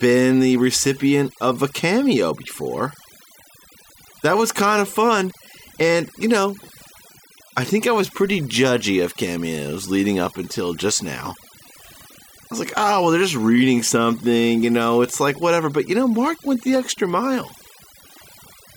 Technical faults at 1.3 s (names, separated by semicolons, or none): overdone noise removal